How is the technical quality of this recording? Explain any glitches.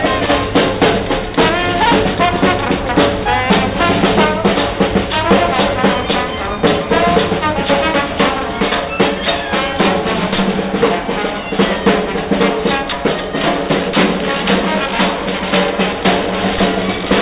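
No glitches or faults can be heard in this recording.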